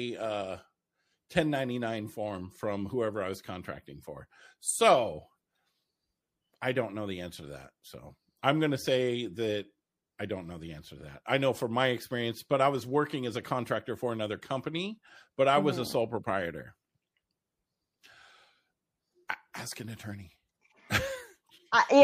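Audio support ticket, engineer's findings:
Watery, swirly texture across the whole speech clip; metallic chirps on sibilance. Likely MP3 compression, damage plainly audible. The encoder ran short of bits and zeroed weak frequency lines that flicker frame to frame. Fits a low bitrate around 64 kbps.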